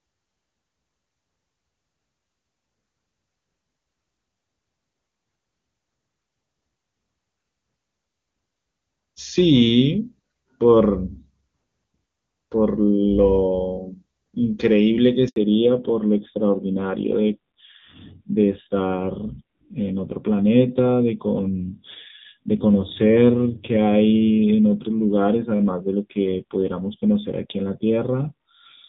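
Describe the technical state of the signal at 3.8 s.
At 3.8 s the speech is intact, with no dropout, distortion or other fault, and it carries the clean, wideband sound of AMR wideband (HD Voice) coding at a high rate.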